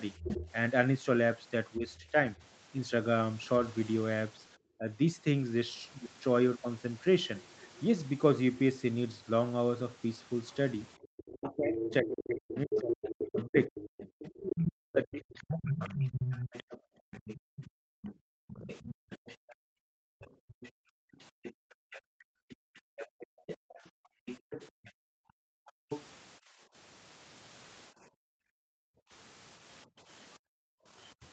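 From 0.22 to 2.45 s the other side's voice leaks through, likely because the echo canceller left loudspeaker sound in the microphone. A second talker sits about 10 dB under the speech. From 1.77 to 4.88 s the speech is suppressed in double talk, likely because the canceller, unable to separate the talker from the echo, turned both down. The main voice dips by about 10 dB in short pieces totalling roughly 0.3 s.

A faint scrap of leakage returns at 7.61–7.8 s, about 30 dB down. At 10.98–11.03 s the echo canceller gates the background, clamping the microphone while the loudspeaker plays, so the room sound drops by about 15 dB for a moment.

From 11.18 to 26.03 s the far voice leaks through again at about 10 dB below the speech. Within that stretch, from 11.31 to 15.99 s, double-talk suppression is severe: the talker is cut by as much as about 40 dB for around 4 s in total, breaking up in pieces.

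From 16.8 s to the end the background is gated hard, by about 40 dB, leaving the room sound largely absent. A last trace of leakage, about 35 dB down, sits at 31.23–31.28 s. Throughout, the band stops at 8 kHz, consistent with the call processing and the Opus path.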